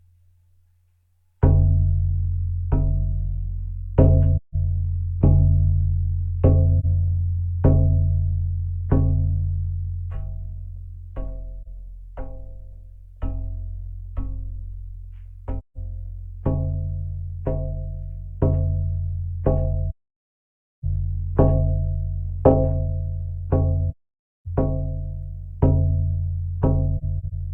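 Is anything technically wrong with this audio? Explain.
Yes, there's AAC frame loss with muting. Lost frames get decoded as silence, and the overlapping windows fade the sound out and back in around each gap. It happens at 4.37–4.55 s, 6.80–6.85 s, 11.62–11.67 s, 15.58–15.77 s, 19.90–20.84 s, 23.90–24.46 s and 26.98–27.33 s. The single lost frames at 6.80 and 11.62 s come across as brief dips. The longer runs, nearly a second at 19.90 s and over half a second at 23.90 s, are soft-edged holes. Near the end there are a few scattered short dropouts of up to about 40 ms.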